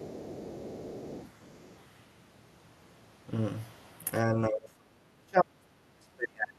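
From the start of the clip to 1.76 s, a second voice can be heard faintly beneath the main speech, about 20 dB below it. This is the other side's voice leaking through. The likely cause is that the talker's device played the far end on a loudspeaker, and the echo canceller did not fully subtract that signal from the microphone pickup. A residual copy of the remote talker was therefore sent back down the line.

From 4.24 s to the end of the clip, the main speech is pulled down sharply, with the deepest dips reaching about 40 dB. This is speech suppressed in double talk. The likely cause is that both sides were speaking at once, and the echo canceller could not tell its own talker apart from the loudspeaker echo. It attenuated the whole microphone signal, so the near-end speech fades and drops out in pieces over that stretch.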